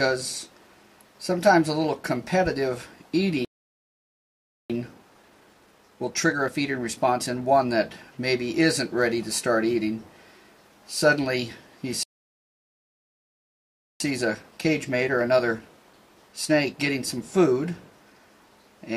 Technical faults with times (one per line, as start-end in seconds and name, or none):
3.45-4.70 playback stall
4.70-7.70 time-compressed catch-up
12.03-14.00 playback stall
14.00-17.00 time-compressed catch-up